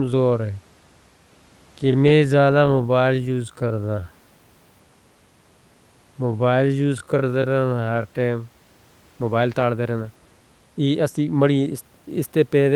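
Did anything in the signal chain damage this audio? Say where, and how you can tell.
Yes. From the start to 9.14 s, the speech runs at about 0.6 times its natural pace while its pitch stays put. It drags. At 9.14 s the pace snaps back to normal. This is a time-stretched section, likely done in software before storage, which repeats short pieces to lengthen the audio without lowering pitch. The room noise, about 37 dB below the speech, belongs to the recording.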